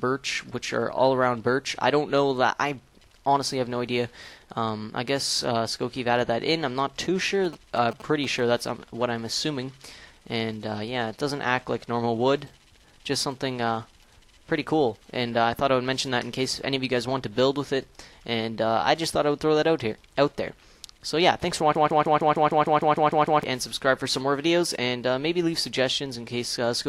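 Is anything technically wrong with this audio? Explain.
Yes, there are two faults.

From 7.44 to 8.40 s there are GSM signalling bursts: a galloping dit-dit-dit of short buzzes at about 217 Hz, roughly 15 dB below the programme. A nearby 2G phone exchanging brief control bursts with its network induces RF in the audio wiring, and a junction rectifies it into audible pulses. Unlike steady mains hum, it comes in rhythmic clumps and sits at 217 Hz rather than 50 or 60 Hz.

From 21.75 to 23.43 s a broken-record loop takes over. A 152 ms fragment repeats eleven times back to back, and whatever sound belonged in that stretch never plays. The likely cause is a player, encoder or stream stalling and resending the last block it held. Each repetition is identical and does not decay, which rules out an echo or reverb tail. It also cuts the timeline rather than simply stuttering briefly.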